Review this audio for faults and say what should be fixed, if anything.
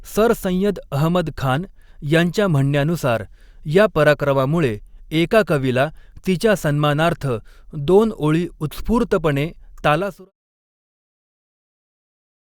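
Nothing stood out on listening to this speech, and the smooth fade-out that begins around 10 s and is complete by 10.32 s sounds like a deliberate edit, so there is nothing to fix.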